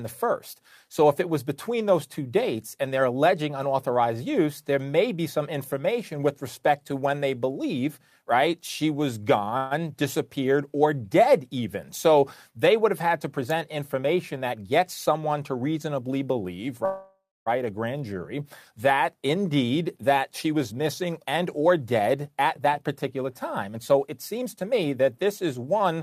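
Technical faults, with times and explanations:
9.57 to 9.73 s, call audio freeze: Just after "believe right she was", the sound stalls for about 135 ms. The last bit of audio is stretched into a short fading buzz. The likely cause is delayed packets that let the jitter buffer run dry. Nothing is lost. The speech picks up where it stopped, just later.
13.38 to 15.39 s, jitter buffer speed-up: Between "would have had to" and "to reasonably believe", the speech runs at 107% speed with unchanged pitch. Over-full buffering is trimmed by cutting out short pitch-period slices again and again. About 150 ms is removed, so this stretch sounds slightly hurried.
16.85 to 17.48 s, call audio freeze: After "to reasonably believe" and before "a grand jury", a longer stall of about 609 ms is heard. The held sound fades out, and about 230 ms of it is silence. It likely comes from the jitter buffer emptying while packets were held up. 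The speech then resumes intact, with no words dropped.
19.14 to 25.97 s, jitter buffer speed-up: For nearly seven seconds the speech runs at 108% speed at normal pitch. Repeated removal of tiny pitch-length pieces drains the backlog, about half a second in all. The result is a steady rushed pace.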